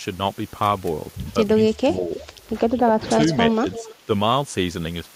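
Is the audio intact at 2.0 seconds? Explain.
No. From 1.72 to 2.15 s the speech is pushed down by roughly 15 dB at its deepest, sounding dipped. This is likely speech suppressed in double talk: the echo canceller mistook overlapping far-end audio for echo and attenuated the talker too.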